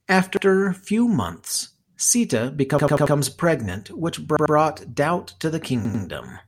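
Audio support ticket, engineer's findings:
Repeated buffer, four stutters: 0.37 s (before "few months"), 2.79–3.16 s, 4.37 s (after "pregnant which"), 5.85 s (after "doubt to the"). Playback underrun; the device replays the last ~93 ms chunk, which fits a 4096-sample buffer, with hard joins.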